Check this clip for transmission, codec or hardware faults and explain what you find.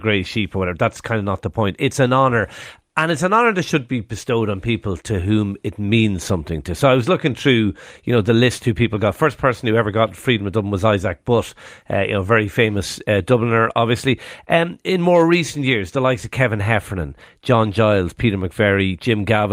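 No faults found anywhere in the speech recording.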